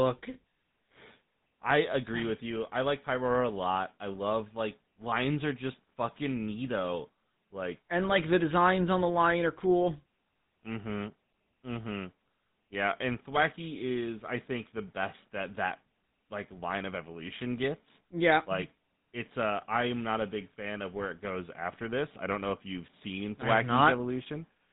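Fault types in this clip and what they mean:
GSM full-rate codec: The whole speech clip has been through the original GSM phone codec, which fits a 13 kbps stream. It rebuilds speech from a vocal-tract filter fed by a coarse, evenly spaced pulse train, so fine detail in the excitation is lost. You can plainly hear a buzzy, gritty roughness on the voice, and the top end stops dead around 3.9 kHz, giving that boxed-in, old-mobile-call sound.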